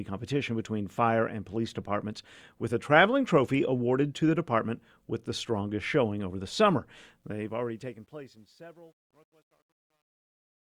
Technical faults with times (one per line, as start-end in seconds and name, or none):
7.21-10.76 truncation distortion on a fade